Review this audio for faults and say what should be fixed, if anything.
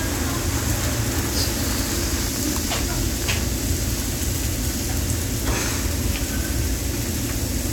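A train of clicks runs from 1.61 to 3.40 s: around thirty similar pops at about 16.3 per second, irregularly spaced, peaking roughly 5 dB above the sound. The likely cause is interference from nearby equipment or a faulty connection or power supply. Prevent it by isolating cables from noisy equipment and checking connections and the power supply.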